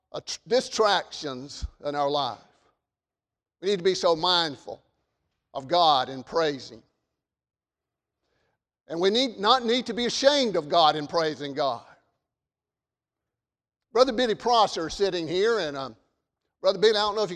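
Speech recording, no technical faults audible anywhere in the clip.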